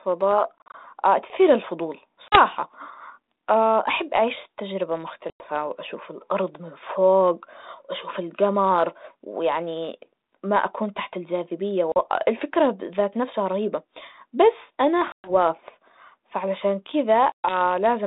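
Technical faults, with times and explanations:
0.58–0.75 s, 2.29–2.40 s, 5.30–5.45 s, 11.92–11.97 s, 15.12–15.31 s and 17.32–17.57 s: packet loss on an ADPCM call. Two to seven packets go missing each time. About 40 ms of sound vanishes at 2.29 and 11.92 s, 100 ms at 5.30 s and 120 ms at 15.12 and 17.32 s. The first event is split into short holes of up to 40 ms spread over 160 ms. Each gap is filled with abrupt silence. G.726 at 32 kbit/s sends only differences from an adaptive prediction, so when a packet is lost the receiver's predictor and step size drift away from the sender's. The speech then comes back slightly distorted before it settles over a few tens of milliseconds, all within the narrow 200 Hz to 3.7 kHz telephone band.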